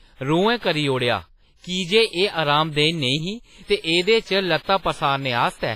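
From the start and through the whole speech clip, the sound is ringing and washy. A hiss rises and falls with the speech, and nothing is heard above 15.6 kHz. This is heavy codec damage, likely from WMA compression. A transform codec at a low bitrate, here one that fits about 24 kbps, coarsely quantises long blocks. Its noise smears across tens of milliseconds. Weak high lines are dropped to zero.

At 3.80 s comes a pre-echo. A short hiss appears about 39 ms before a sharp onset, running to 3.84 s. The onset landed late in a coding block. The noise budget set by that loud attack was spread over the whole block, so it also filled the quiet gap just before. The attack itself sounds softened and smeared rather than crisp.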